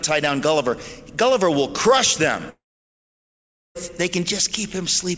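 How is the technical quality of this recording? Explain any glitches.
The recording has one clear glitch: a long interruption partway through. The call codec's band limit, with nothing above 8 kHz, is audible throughout.

From 2.50 to 3.77 s, a long network dropout: a fading buzz, then about 1.2 s of silence, likely lost packets. Unlike a brief loss blip, the sound resumes with a chunk missing.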